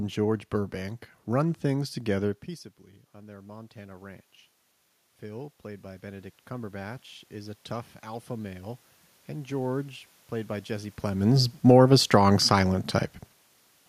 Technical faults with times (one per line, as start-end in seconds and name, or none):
3.13-4.33 automatic gain rising
5.21-11.02 automatic gain rising